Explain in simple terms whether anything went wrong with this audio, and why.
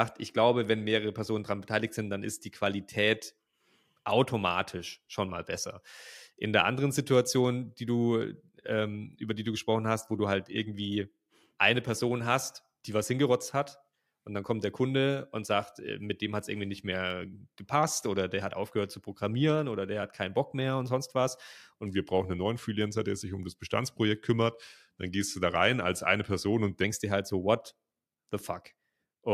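Something did go wrong, from 21.86 to 26.84 s. Just after "mehr und sonst was", the speech slows down and drops in pitch, by about one and a half semitones. It plays at 0.919 times normal speed, so it sounds lower and heavier. This is a wrong sample rate fault. The sound was played back slower than it was recorded, which fits 48 kHz audio played at 44.1 kHz. Normal speed returns by "dir halt so what".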